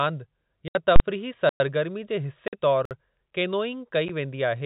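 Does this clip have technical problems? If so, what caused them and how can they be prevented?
Yes. The speech has three kinds of fault, heard over a G.711 telephone coding path.

Packet loss filled with silence: packets went missing on the network, and the receiver played silence in their place instead of concealing the gap. The speech is cut by holes of 70 ms at 0.68 to 0.75 s, 50 ms at 2.48 to 2.53 s, and a brief 10 ms dropout at 4.08 s. All are multiples of 10 ms, which fits 10 ms packets. Each hole starts and ends abruptly. To prevent this, use packet loss concealment and a jitter buffer, and improve the link's reliability.

Invalid numbers at full scale: a calculation in the processing chain produced infinite or undefined values, and these were clamped to the largest sample value. From 0.96 to 1.00 s the output sits pinned at one extreme value for 40 ms. This is heard as one sharp, very loud bang. 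To prevent it, check the processing for divide-by-zero and overflow, and replace invalid values with zero before they reach the output.

Block of digital silence: the output buffer was likely not filled in time, so blocks of zeros went out in place of the sound. The audio cuts to dead silence for 108 ms at 1.49 to 1.60 s and for 55 ms at 2.85 to 2.91 s. There is no fade in or out. To prevent this, give the audio thread higher priority or a larger buffer so it never misses its deadline.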